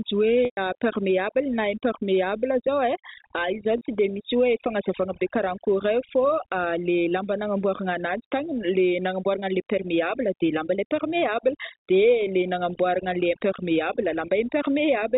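Right from the start there's overdone noise removal. The suppressor is clamping down on any band near its noise estimate, so the background drops and breaks up into little twinkling specks, and the quieter bits of speech get eaten too.

At 0.45 to 0.57 s there's packet loss with pitch repetition. About 120 ms goes missing, which fits four lost packets. The receiver loops the last pitch period and fades it out, so you hear a brief buzzy hold sinking into silence before speech cross-fades back. A shorter one at 3.78 to 3.81 s, about 30 ms or a single packet, just sounds like a slightly held, buzzy note, with the G.711 telephone band audible around it.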